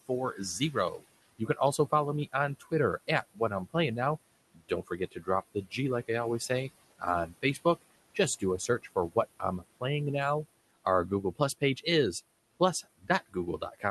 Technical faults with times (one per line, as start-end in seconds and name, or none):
0.00-13.90 noise suppressor artifacts
0.08-3.75 speech cut by the noise suppressor
4.52-9.83 speech cut by the noise suppressor
10.84-11.86 speech cut by the noise suppressor
12.60-13.90 speech cut by the noise suppressor